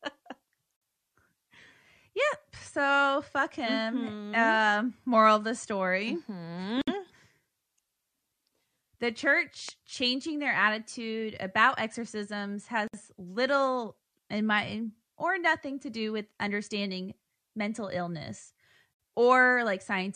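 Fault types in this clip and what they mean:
Gap at a join of encoded pieces: Speech stops for about 51 ms at 0.76 s, then about 60 ms at 6.82, 12.88 and 18.94 s, every 6.0 s. Each separately encoded piece keeps its start-up silence and end padding. Unlike a dropout, speech resumes exactly where it stopped.
Loud pop: A single sharp pop lands at 9.69 s, around 10 dB above the speech and lasting about 20 ms, likely from a voltage step such as static or a switch. Unlike a gap, it sits on top of the speech, which carries on underneath.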